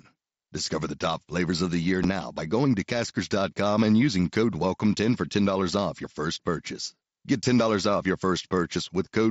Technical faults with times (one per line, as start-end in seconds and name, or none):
2.04 unconcealed Bluetooth headset packet loss